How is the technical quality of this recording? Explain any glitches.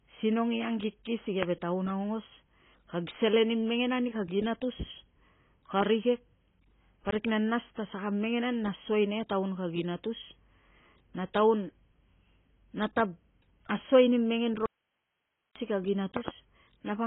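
The recording is technically poor: heavy codec damage runs throughout, with two loud pops and one dropout.

AAC compression affects the whole clip. The speech sounds dull and smeared, with a warbling, fizzy edge on sibilants. This is likely from AAC-LC at a very low bitrate, around 16 kbps. The encoder discards everything above 3.8 kHz and quantises the remaining bands coarsely. A spectrogram would show a hard ceiling at 3.8 kHz and patchy holes below it.

A loud pop occurs between 1.43 and 1.45 s, just after "i angkiki si" and before "taun aungos kag selen". A second pop event, a quick double pop, comes at 16.17 to 16.30 s. Both are likely sudden voltage pulses, from static or a switching glitch, added on top of the speech, which carries on underneath. On the waveform they appear as narrow spikes standing about 15 dB and about 10 dB above the signal, and as full-height vertical streaks on a spectrogram.

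An audio dropout to a faint residue runs from 14.66 to 15.56 s, right after "tav asuai ni mengen". The speech cuts off abruptly for about 0.9 s, leaving only hiss roughly 55 dB down. This likely happened because the signal was lost while the path downstream stayed live. The waveform shows a flat near-silent block, and the spectrogram a dark gap with a faint noise floor.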